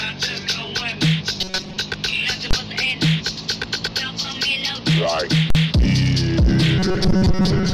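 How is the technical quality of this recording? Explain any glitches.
The recording has clear technical faults: two stretches of robotic buzzing and two loud bursts of invalid values.

From 1.41 to 1.77 s, and again from 6.79 to 7.74 s, the sound turns into a rigid, metallic buzz at 188 Hz. This is robotic sound from repeated short buffers. The likely cause is audio arriving too seldom, so playback loops a slice of about 5.3 ms. Most of the real audio in those stretches is skipped.

At 2.51 to 2.53 s, and at 5.50 to 5.55 s, invalid numbers at full scale appear. Infinite or invalid values were forced to maximum level. The output locks at one extreme value, far beyond the audio's peaks, for 23 ms, then 46 ms. Each is heard as a sharp, very loud bang. The lengths fit 1024-sample and 2048-sample blocks.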